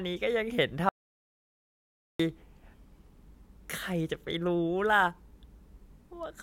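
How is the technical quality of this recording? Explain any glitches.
An audio dropout to silence runs from 0.89 s to 2.20 s, cutting the speech off abruptly and restoring it just as suddenly. For about 1.3 seconds the signal falls to silence with no room tone, likely because the input was lost while recording continued, so that stretch of speech is missing.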